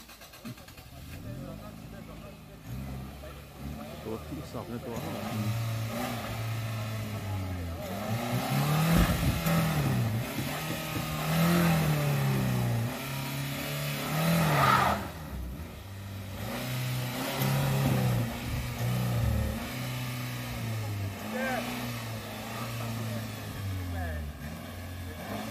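No technical faults can be heard anywhere in this audio.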